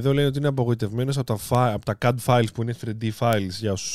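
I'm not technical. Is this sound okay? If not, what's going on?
No. From about 0.21 s to 3.78 s there are sharp ticks, roughly ten of them, one about every 0.4 seconds. These are word clock ticks. Two pieces of digital gear pass the speech between them, each keeping time with its own clock, and those clocks drift apart by a tiny amount. Each time they slip, a single sample is lost or doubled. Random clicks come at scattered moments, but these keep a steady rhythm, even though some ticks sound sharper than others.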